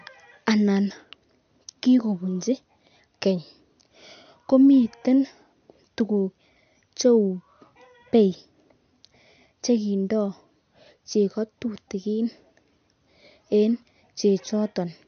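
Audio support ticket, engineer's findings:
Whole clip, start to end: speech dull, nothing above 6.5 kHz, watery swirl on s sounds, smeared onsets. Likely MP3 compression, bit-starved encoder chopping treble and flickering weak bands frame to frame. Damage fits roughly 50 kbps.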